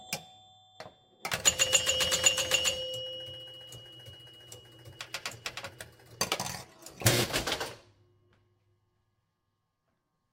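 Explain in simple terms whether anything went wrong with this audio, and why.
Nothing went wrong with this recording of sounds. At no point does the audio do anything it shouldn't, so there is nothing here to fix.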